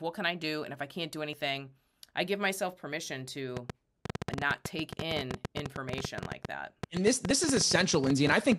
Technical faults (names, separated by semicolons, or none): audio missing between chunks; train of clicks